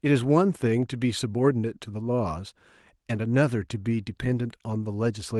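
No technical faults are audible.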